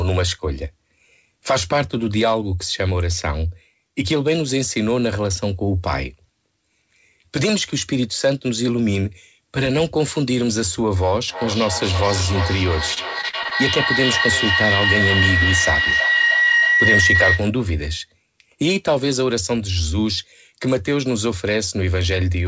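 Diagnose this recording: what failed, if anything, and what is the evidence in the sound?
A rising howl near 2 kHz builds from 11.28 to 17.58 s, pulsing about every 300 ms and peaking about 3 dB above the speech. This is a feedback howl in the acoustic path: a loudspeaker feeding the microphone, gaining level each trip around the loop.

From 12.94 to 13.78 s the speech turns choppy, with repeated dropouts up to 40 ms long patched by stretched copies of the preceding sound. This is repeated packet loss on the network, concealed by the jitter buffer.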